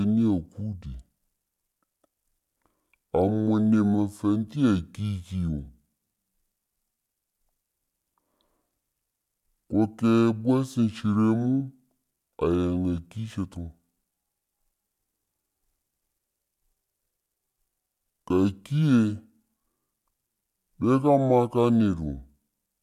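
From start to finish the speech sounds slow, heavy and unnaturally deep, running at about two-thirds of its proper pace and sitting roughly 7 semitones low, close to a musical fifth. This is a wrong sample rate fault: the samples are being played back more slowly than they were captured, with no conversion in between, so timing and pitch drop together by the same factor. A ratio of 0.667 fits audio recorded at 48 kHz but played at 32 kHz.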